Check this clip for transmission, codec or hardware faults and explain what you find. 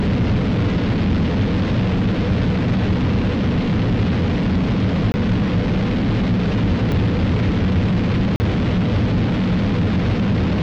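Three blocks of digital silence occur, at 5.12 to 5.14 s (20 ms), at 6.92 s (about 2 ms) and at 8.36 to 8.40 s (40 ms). The sound cuts out abruptly and resumes without a fade: the brief one ticks, while the longer two sound like short holes.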